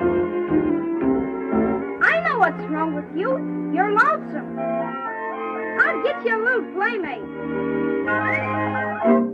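From 0.70 to 1.82 s the sound slows 5.4% and drops 96 cents, then snaps back, likely a drift correction step; wow would waver.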